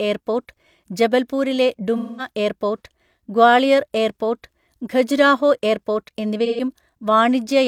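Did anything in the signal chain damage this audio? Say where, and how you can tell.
Yes, at the codec stage: AAC frame loss with concealment, in two places. After "എയർപോർട്ട് ജബൽപൂരിലെ", from 1.97 to 2.28 s, the speech turns smeared and noisy before resuming with "എയർപോർട്ട് ഗ്വാളിയർ എയർപോർട്ട് ഖജുരാഹോ". A shorter patch follows "ഗ്വാളിയർ എയർപോർട്ട് ഖജുരാഹോ എയർപോർട്ട്" at 6.45 to 6.61 s. The decoder is rebuilding missing frames from the last good spectrum. The gaps point to about five lost frames the first time and about three the second.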